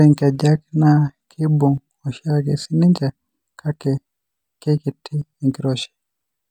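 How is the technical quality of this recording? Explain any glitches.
Listening through the recording, nothing stood out as a technical problem, and there are no glitches to explain.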